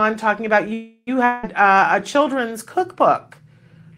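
From 0.73 to 1.09 s the last sound is stretched into a fading buzz ending in about 40 ms of silence, likely a call audio freeze. The speech then resumes intact, 337 ms late.

From 1.25 to 1.45 s a similar fading fill runs for 180 ms, likely a long network dropout. The speech returns with 180 ms lost.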